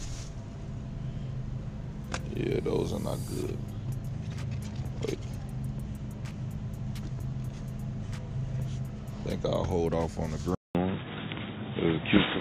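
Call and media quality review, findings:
Input switched to a poorer device, likely a fallback microphone or headset call profile, at 10.55 s, running through to the end. Preceded by a 200 ms dropout at the switch. Afterwards, band limited with nothing above 3.8 kHz: dull, boxy tone. Level shifts by a few dB. A new, faint noise floor appears, well below the signal. Consistent with the capture path rerouting to a narrowband device mid-recording.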